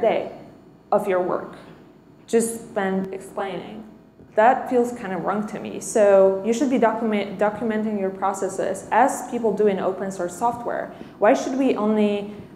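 From 3.05 to 4.28 s the sound turns rough and slightly doubled. This is channel delay causing comb filtering: one channel lags the other by around 20 ms, so summing to mono cancels frequencies spaced from roughly 20 Hz.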